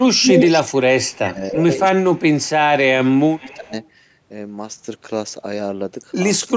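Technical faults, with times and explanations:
0.01–0.23 s, speech suppressed in double talk: the opening dips by about 15 dB over roughly 150 ms, likely because the echo canceller mistook overlapping talk for echo and turned both down.
1.11–1.39 s, speech suppressed in double talk: a deeper gouge of about 20 dB across roughly 300 ms. Unlike echo, nothing is added; sound is taken away.
1.92–3.72 s, speech suppressed in double talk: about a second of the voice pumped down by as much as about 25 dB.
6.46–6.55 s, speech suppressed in double talk: a brief drop of about 25 dB, about a tenth of a second, right at the end.
0.23–1.65 s, echo leak: a second copy of the voice trails 325 ms behind at about the same loudness as the original, likely from a loudspeaker whose echo canceller let the pickup through. The fixed delay separates it from reverb, which smears rather than repeats.
2.12–2.47 s, echo leak: a faint 329 ms repeat, about 35 dB down.
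3.39–3.88 s, echo leak: the repeat returns at 333 ms, about 25 dB down. The audio has no content above 8 kHz, which fits the call's microphone processing.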